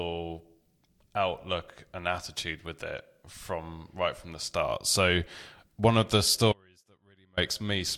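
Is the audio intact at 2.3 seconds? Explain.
Yes, the speech is intact at 2.3 seconds, with no audible fault at that moment.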